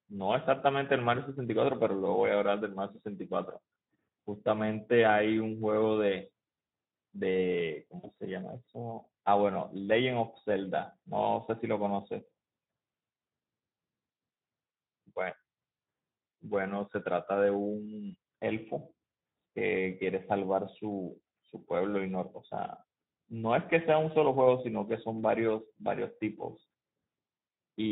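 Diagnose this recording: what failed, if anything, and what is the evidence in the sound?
The codec stage failed throughout: the speech was carried by the Speex codec at a low-to-middle quality setting, one that fits a bitrate around 11 kbps. CELP coding at that rate leaves too few bits to describe the excitation signal, so the decoder rebuilds the voice from a coarse approximation. The damage is plainly audible across the whole clip as a noisy, hoarse grain on every voiced stretch.

At the network stage, a brief outage occurred from 7.99 to 8.10 s and was handled by VoIP packet loss concealment in the speech codec. About 40 ms of audio went missing, which fits two lost 20 ms frames. The decoder filled the gap by extending its last pitch and spectral envelope at falling gain. The result is a short stretched-out sound that fades instead of a clean dropout, and it stays weak for a moment after the packets resume.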